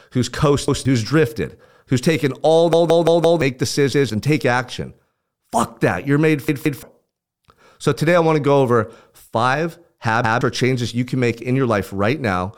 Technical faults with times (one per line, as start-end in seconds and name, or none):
0.68-0.85 repeated buffer
2.73-3.41 repeated buffer
3.93-4.10 repeated buffer
6.49-6.83 repeated buffer
10.24-10.41 repeated buffer